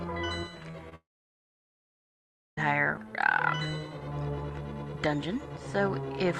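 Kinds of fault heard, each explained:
short concealed packet loss: Brief smears or wobbles at about 0.71 s and 0.89 s, each lasting around 20 ms. In each case a packet of the call arrived too late, so the receiver continued the preceding sound to cover the gap, then blended back into the real audio.
long network dropout: From 0.95 s the sound fades away and leaves about 1.55 s of silence, then resumes at 2.59 s with roughly 1.6 s missing. This is likely a network stall: the receiver briefly extended the last sound, then had nothing left to play.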